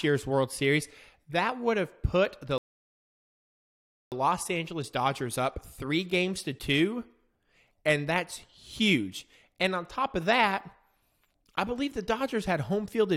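At 2.58 s, just after "would have put the", the speech halts in a rebuffering stall: playback drained its downloaded audio and waited for more before continuing. The silence lasts until 4.12 s, adding about 1.54 s, then the speech picks up at exactly the point it stopped, with nothing skipped or repeated. On a waveform this shows as a flat gap between intact speech; on a spectrogram, a blank vertical band with the harmonics continuing unbroken on either side.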